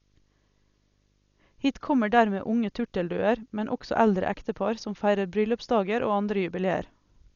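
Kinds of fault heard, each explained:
Video or display buzz: A screen or video cable is coupling its signal into the audio path, putting a buzz at the 50 Hz field rate with hash above it under the speech, plus a thin 15.6 kHz line-rate whine. Both sit faint, well below the speech.
Dolby Digital compression: The speech is dull, with nothing above 6.9 kHz and a rough, fluttering noise clinging to its tones. This is likely Dolby Digital coding starved of bits, which fits a low rate around 48 kbps: the band is narrowed and empty frequency lines are filled with dither noise.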